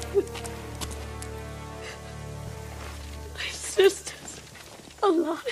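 A skip ahead at 2.47 to 2.57 s jumps the audio forward: roughly a fifth of a second is missing, dropped in transit or discarded when the jitter buffer overflowed with later audio already queued, so the material on either side joins almost seamlessly. A jitter buffer speed-up follows from 3.02 to 3.35 s, where the receiver trimmed short pitch-period pieces repeatedly to shed surplus delay, removing some 70 ms in total. The sound runs at 117% speed with unchanged pitch and comes across as hurried.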